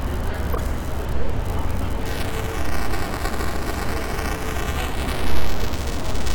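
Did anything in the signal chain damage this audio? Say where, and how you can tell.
Yes, two separate problems. The first is at the codec: a corrupt frame decoded at 0.52 to 0.60 s, and again briefly at 4.52 s. Each one is a short chirpy blip of noise that doesn't belong to the sound around it, peaking around -10 dBFS the first time and around -20 dBFS the second. Flipped bits in the compressed data made the decoder apply wrong gains or misread codes for a few frames, so energy landed at the wrong frequencies.

The second is at the driver or buffer stage: buffer tearing from 2.06 s through to the end. You get a steady robotic buzz at 375 Hz riding on the audio, and it's only there when there's signal. That rate fits a 128-sample buffer at 48 kHz. The write and read pointers have drifted so they cross inside every period. A small slice of each buffer plays audio from one lap back, roughly 10 ms old, with hard joins on both sides.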